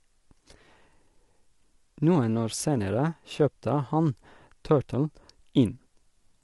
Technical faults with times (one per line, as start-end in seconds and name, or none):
0.00-6.43 low-delay AAC compression